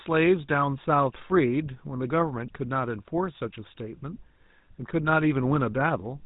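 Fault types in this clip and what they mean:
GSM full-rate codec: throughout, plainly audible. The speech is rebuilt from a vocal-tract model driven by a sparse, regularly spaced pulse train, giving the buzzy, gravelly roughness heard here. Nothing above 4 kHz survives, which fits the 13 kbps GSM full-rate coder.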